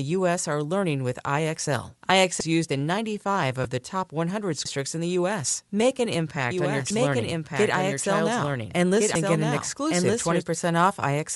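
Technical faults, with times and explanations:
throughout: Bluetooth LC3 compression. The sound has a breathy, grainy edge. The damage is plainly audible. The upper spectrum is thinned and partly filled with noise. This is likely LC3 coding on a Bluetooth LE Audio link, and it fits 10 ms frames at about 48 kbps.
2.40, 4.65, 6.90, 9.15 s: audio missing between chunks. Each point has a sudden skip, and about a third of a second of sound is gone. The two sides are butted together with no gap. The cause is likely a recorder losing audio as it switches between chunks of about 2.5 s.
3.64 s: lost LE Audio frames. One 10 ms frame never arrived. The decoder rebuilt it from the previous spectrum with scrambled signs. That gives a brief noisy smear in place of clean sound. The loss is short, so it passes quickly.
6.51 to 10.43 s: doubled audio track. A second full-band copy runs about 1.5 s behind the original and about 5 dB quieter. 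It has no decay or room colour. It starts and stops abruptly. The cause is likely a second, slower capture path mixed in.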